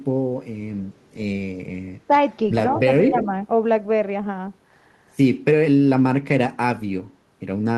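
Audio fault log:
1.93–1.99 s, 2.7–2.81 s and 3.03–3.25 s, echo leak: the far end's echo canceller most likely failed to fully cancel the loudspeaker sound its microphone picked up, and sent that residue back down the line. A copy of the speech trailing the original by 171 ms surfaces in three short scraps, starting faint at about 30 dB below the speech, rising to about 20 dB below, and by the third scrap only about 10 dB below, heard as a delayed doubling.
3.1–3.26 s, speech suppressed in double talk: with both ends sounding at once, the echo canceller likely could not tell the local talker apart from the loudspeaker echo and turned everything down together. Over roughly 70 ms within this span, overlapping the loudest echo scrap, the speech level sags by about 5 dB, so the talker briefly sounds pulled back, heard through the call's Opus coding.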